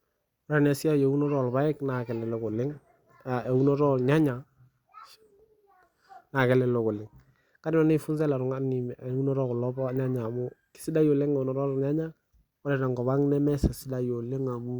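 Speech recording; no technical faults to report.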